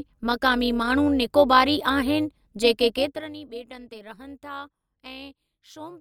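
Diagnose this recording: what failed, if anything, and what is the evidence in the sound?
Overlap-add ripple runs through the whole recording, from a frame-based processing stage. The speech carries a metallic buzz from a ripple of about 6 dB at around 200 Hz. The frames are rebuilt with windows whose overlap does not sum to constant gain, so the level dips once per frame.

Zipper noise appears from 2.98 to 3.34 s, in the gain stage. While the level falls by roughly 20 dB, a ticking rides on the speech. The gain moves in unsmoothed steps of about 2 dB, around thirty per second, and each jump clicks.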